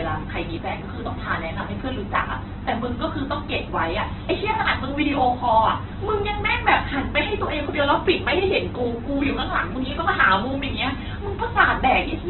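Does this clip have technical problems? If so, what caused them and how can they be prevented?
Yes. Throughout, the speech sounds narrowband and grainy, with nothing above 4.1 kHz, likely heavy Opus compression; the damage fits an 8 kbps stream, where starved bands get noise fill. A spectrogram shows a flat ceiling at 4.1 kHz and speckled harmonics. Encoding at a higher bitrate prevents it.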